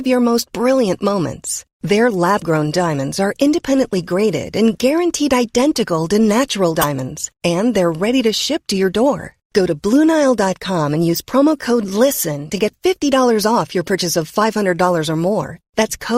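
At 6.79 to 6.85 s the speech is broken by a corrupt frame decoded: damaged bits in what sounds like about two consecutive compressed frames were played as if valid. Misread gains and codes throw energy into the wrong frequency bands for those 58 ms, producing a harsh chirp-like burst. Lost-packet concealment would instead give a muffled or smeared repeat of nearby sound. A click would be a single, far shorter impulse.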